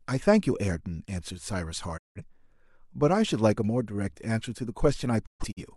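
Around 1.96 s the speech drops out for about a quarter second, back by 2.21 s. That's a digital broadcast dropout: the receiver lost good frames and muted, with a quick 20 ms fade rather than a hard click, and roughly 171 ms of programme is simply gone, which fits four lost frames. It happens again from 5.25 to 5.62 s, this time as scattered holes over about 300 ms, the longest gap 128 ms.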